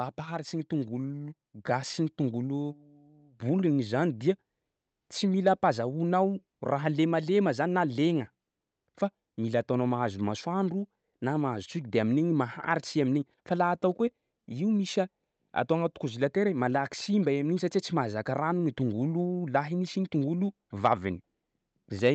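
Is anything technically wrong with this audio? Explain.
Yes, there are two faults in the speech.

At 1.71 s the microphone volume steps up by about 4 dB. The call software raised the input gain at once, so voice and background jump louder together.

At 5.47 s there is brief hard clipping, just before "ampazahoanao raha lemalema zany". A peak about 2 dB too large was cut flat, giving a short crackle.

The call path runs through Opus, which limits the top end to about 8 kHz and fits a 32 kbps stream.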